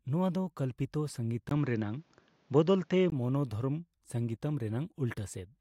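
From 1.49 s to 3.12 s the speech turns dull and narrow, with nothing above 7.3 kHz, a 20 ms gap at the switch, a level shift of about 5 dB and faint new background noise. The likely cause is the input switched to a poorer device.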